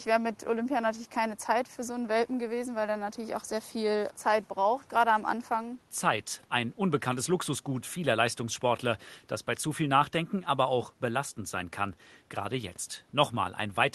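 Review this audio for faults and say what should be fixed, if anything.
Nothing to fix: no system faults are audible in this speech recording, and the room's own background noise sits about 37 dB below the speech as part of the original capture.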